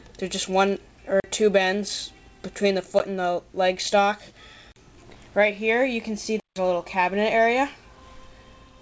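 The output buffer was probably not filled in time on four occasions, leaving blocks of digital silence. Each block cuts the audio hard to silence and back. These fall at 1.2 to 1.24 s (40 ms), 2.99 s (about 13 ms, a brief tick), 4.72 to 4.76 s (40 ms), and 6.4 to 6.56 s, where the 160 ms gap is an audible hole. The audio passed through a call path, and nothing is heard above 8 kHz, which fits the G.722 codec at 64 kbps.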